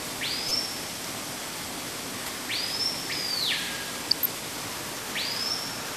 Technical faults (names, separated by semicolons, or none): MP2 compression; DAB burbling